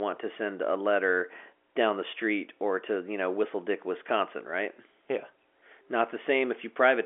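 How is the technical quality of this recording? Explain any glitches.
No technical faults are audible.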